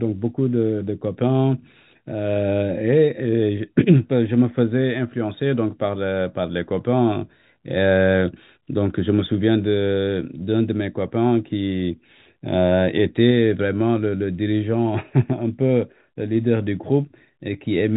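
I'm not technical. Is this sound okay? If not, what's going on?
Yes, nothing stood out as wrong when listening to this speech recording, which simply has the narrow sound you'd expect from ordinary G.711 telephone coding, like a normal phone call.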